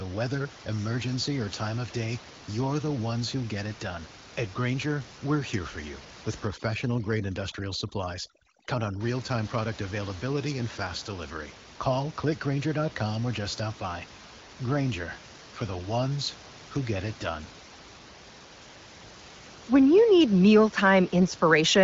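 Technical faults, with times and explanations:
6.47–9.01 s, overdone noise removal: after "here for you with", bands near the noise estimate are cut, leaving twinkling near-silence and taking quiet parts of the voice with them.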